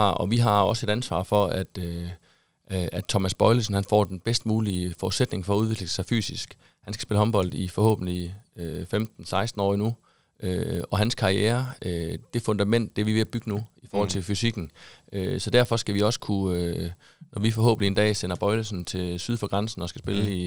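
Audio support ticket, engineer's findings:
Resampler restarted on every block, throughout. Symptom: steady 20 Hz tick train, a fine buzz riding on the speech, gone in pauses. Component: 24 kHz to 48 kHz sample-rate converter, processing 50 ms blocks independently with no carried-over filter history. Each block edge gets a small error. Tick spacing matches block length exactly. Unlike mains hum or a ground loop, it follows the signal and vanishes in silence. Unlike dropouts, nothing is lost.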